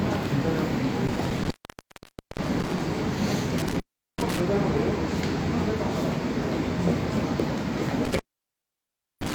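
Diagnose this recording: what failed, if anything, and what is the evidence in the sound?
Intermittent contact in the analogue wiring: the sound cuts out between 1.07 and 2.80 s (open for about 0.88 s), 3.58 and 4.40 s (0.38 s), and 8.05 s to the end (1.02 s). A loose connection breaks the signal path. The waveform collapses to a thin noise floor bracketed by crackle spikes, and the spectrogram shows broadband streaks at each edge.

Overlap between stream segments at the network or playback stage: a tiny skip around 7.40 to 7.43 s, at a segment boundary consistent with 1-second segments. Overlapping time stamps made the player discard real audio, so the waveform jumps discontinuously.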